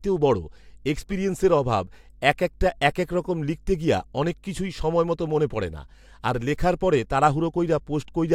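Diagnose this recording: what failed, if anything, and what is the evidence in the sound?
Mains hum from the analogue wiring: a steady 50 Hz tone with low harmonics runs throughout, roughly 30 dB below the speech, from a ground loop or nearby transformer.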